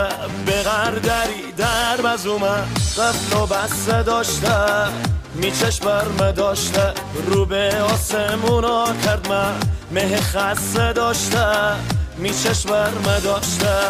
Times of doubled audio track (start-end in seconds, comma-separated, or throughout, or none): none